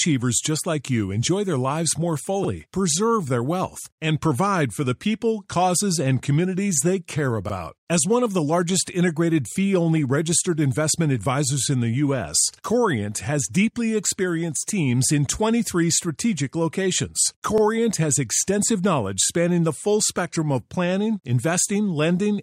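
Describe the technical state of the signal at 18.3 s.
At 18.3 s the signal is intact, with no technical fault audible at that moment.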